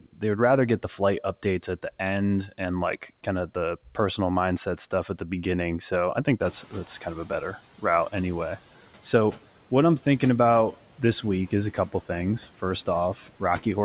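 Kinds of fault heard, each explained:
Speech cut by the noise suppressor: The opening, just before "would rather get the", and a moment near 13.2 s sound swallowed and faint, dipping by about 13 dB and about 11 dB, because the suppressor mistook soft speech for background noise and turned it down.
Noise suppressor catching up: Right after "I think", around 6.4 s, the room noise suddenly swells and passes through with less reduction at first, then sinks by about 9 dB over 180 ms as the suppressor's lagging noise estimate adapts to the higher background level.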